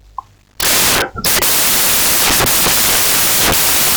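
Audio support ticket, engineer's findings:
Samples built from the wrong bytes, start to finish. Whole speech clip is buried under loud, harsh broadband noise, close to white on the loud parts. Probable component: the PCM reader or decoder stage. Bytes of each sample are being stitched together wrong: swapped order, off-by-one start, or wrong alignment assumed. Upshot is the jittery low bits land in the high end of every value, so you get noise instead of signal. Check endianness and offset first.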